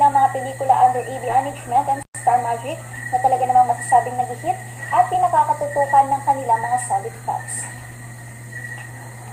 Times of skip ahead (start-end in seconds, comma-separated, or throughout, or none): 1.29